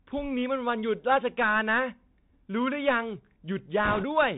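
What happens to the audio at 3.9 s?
Right around there, from 3.85 to 4.04 s, you get bit errors on a Bluetooth voice link. Bits in the CVSD stream got flipped, at a rate somewhere around 5 percent. In CVSD each bit just nudges the waveform up or down one step, so a wrong bit only produces a small misstep that fades out quickly. That's why you hear a rushing, crackly noise over the speech for about a fifth of a second instead of sharp clicks.

That's layered on top of the Bluetooth CVSD headset codec, which is on the whole clip and plainly audible at that moment too. It's the narrowband headset codec: one bit per sample at 64 kHz, with an adaptive step size. Nothing above 4 kHz gets through, so the speech sounds boxed in. Loud high-frequency sounds outrun the step and distort, s sounds come out scratchy, and a granular hiss sits underneath.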